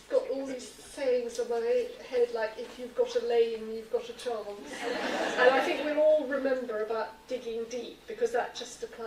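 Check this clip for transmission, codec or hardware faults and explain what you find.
Nothing in the clip points to a fault. There is no event to report anywhere in it.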